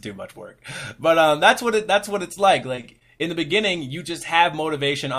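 From 2.75 to 3.21 s, repeated packet loss (robotic sound): four gaps, longest 23 ms, patched by repeating prior audio, showing as stretched, smeared spectrogram slices.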